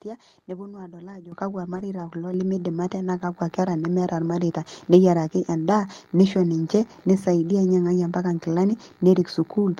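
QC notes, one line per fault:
1.32 s and 2.34 s: microphone volume stepped up. Speech and background jump together, by about 10 dB then about 6 dB, as automatic gain control raises the input level in single steps.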